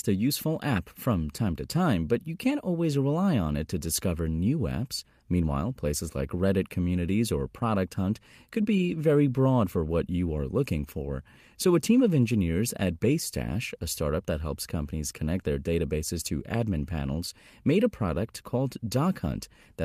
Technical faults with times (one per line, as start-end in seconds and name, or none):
none